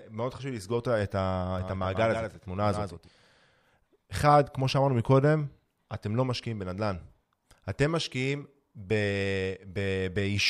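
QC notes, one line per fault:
1.6–3.1 s, doubled audio track: the speech is joined by a single full-band copy trailing it by around 150 ms and sitting about 5 dB lower, most likely a second capture through a slower path or two out-of-step copies left in an edit. Unlike an echo or room reverb, the copy has no decay, no repeats and no room colour, and it switches on and off abruptly at the edges of this span.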